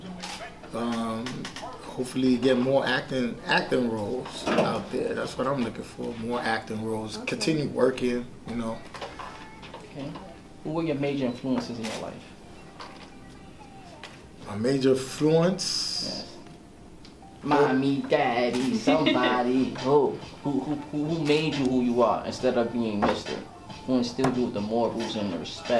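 Nothing stood out as a technical problem on listening.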